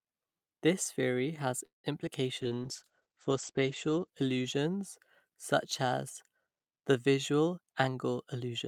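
From 1.65 to 1.86 s a call audio freeze drags the last sound into a fading buzz, then about 140 ms of flat silence. The likely cause is delayed packets emptying the jitter buffer.

Just after "theory has", two instances of short concealed packet loss, at 2.02 to 2.05 s and 2.06 to 2.09 s, each replace about 20 ms with smeared, blurred spectrogram patches.

From 2.42 to 5.88 s a call bitrate drop from 64 to 11 kbps muffles and roughens the sound. The spectrogram's content above 8 kHz disappears, with the lowest rate held for 1.35 s.

After "the visual", from 7.57 s to the end, a jitter buffer speed-up plays the audio at 110% speed with unchanged pitch. It trims roughly a tenth of a second by cutting pitch periods.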